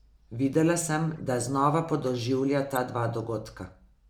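At 1.13 to 1.18 s, then again at 2.76 to 2.79 s, you get a corrupt frame decoded: damaged compressed data played anyway, so energy lands at wrong frequencies. Each is a short chirpy blip spanning a few frames, the second noticeably louder.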